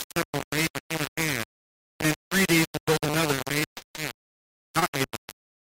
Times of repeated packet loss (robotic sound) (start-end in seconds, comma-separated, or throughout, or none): 3.35-5.48